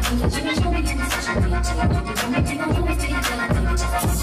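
No technical faults are audible.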